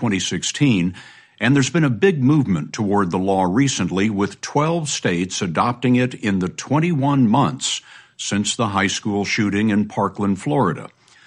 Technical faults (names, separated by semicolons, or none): none